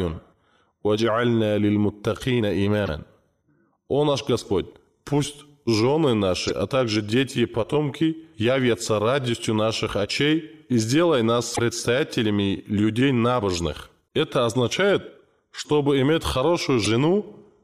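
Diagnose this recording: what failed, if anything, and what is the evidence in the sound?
The failure is at the codec stage: damaged data in a compressed stream, heard as five brief glitches at 2.84–2.89, 6.47–6.51, 11.51–11.59, 14.04–14.08 and 16.84–16.87 s. Corrupted bytes make the decoder misread those frames, lose sync and search for the next valid frame header.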